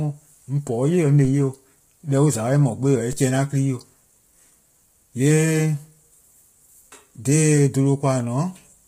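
Throughout the speech, low-delay AAC compression roughens the voice: harmonics sound grainy with noise filling the gaps between them, and nothing remains above 15.6 kHz. Unlike plain bandwidth loss, the damage is heavy and sits inside the band, likely from AAC-ELD at a low rate near 24 kbps.

At 1.25 s and again at 3.13 s, a DC step shifts the waveform's zero line, heard as a low thump. The offset then fades away, as a 5 Hz high-pass drains it. Unlike a dropout or sharp click, the speech carries on uninterrupted beneath it.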